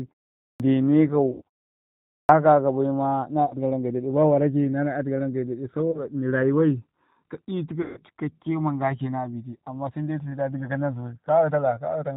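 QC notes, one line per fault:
Throughout, G.729 codec: the speech passes through an 8 kbit/s VoIP codec, which fits G.729A. It models each 10 ms frame as a vocal tract filter, a pitch predictor and a few pulses, and discards everything above 4 kHz. The damage is plainly audible: the speech is band-limited and muffled, and it has a rough, slightly synthetic buzz where the sparse pulses stand in for the real excitation.
0.52 s and 2.21 s, clipped start after a pause: the output device drops into sleep during silence and needs time to wake and lock again once sound resumes. At 0.52 s, after a pause of about half a second, roughly 78 ms of onset is lost. At 2.21 s, after a pause of 0.8 s, roughly 81 ms is lost. Each time the speech bursts in abruptly, with its first sounds missing.
1.32 s, 3.45 s, 5.91 s and 7.82 s, VoIP packet loss concealed by the speech codec: packets went missing, and the decoder filled each gap by repeating its last pitch and filter settings with a falling gain. 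The gaps are 90 ms, 60 ms, 30 ms and 150 ms, which fits runs of 30 ms packets. In each gap the speech smears into a fading buzzy tone or coloured noise. The longest gap, at 7.82 s, lasts until about 7.99 s, and the speech sounds weak and distorted for a moment after real packets return.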